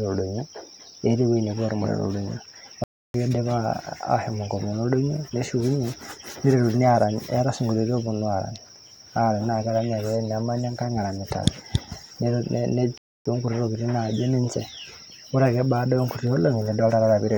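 At 2.84 s the speech halts mid-flow and the output goes fully silent until 3.14 s, about 0.30 s, then carries on. The same playback stall returns from 12.98 to 13.26 s, about 0.28 s. The likely cause is the player running short of data or its thread being held up. What separates this from a momentary dropout is the length: each gap lasts close to a third of a second, heard as a sudden frozen pause rather than a click or tick.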